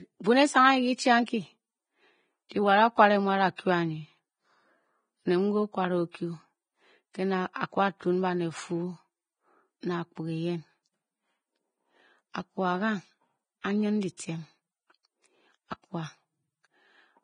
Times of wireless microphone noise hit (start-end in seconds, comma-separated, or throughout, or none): none